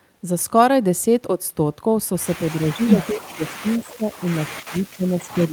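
From 2.55 to 4.27 s the speech dips by up to about 20 dB, losing roughly a second and a half in pieces: speech suppressed in double talk, likely an echo canceller turning down both sides at once. At 3.79 and 4.14 s, faint scraps of the speech return 240 ms late, about 25 and 35 dB down, which is an echo leak, likely from a loudspeaker whose canceller let some of its pickup through. From 4.44 s to the end the speech is suppressed again, dropping as much as about 35 dB.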